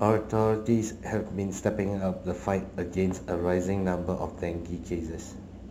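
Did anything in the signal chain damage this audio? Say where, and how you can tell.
Yes: crude rate conversion runs through the whole speech clip, at the sample-rate conversion stage. A faint gritty, inharmonic fizz rides on the louder and brighter sounds, with tones unrelated to the speech's pitch, sitting roughly 35 dB below the signal. This fits a 48 kHz to 44.1 kHz change done by simply dropping or repeating the nearest sample without filtering, so the timing error recurs in a fixed pattern and aliases into spurious tones.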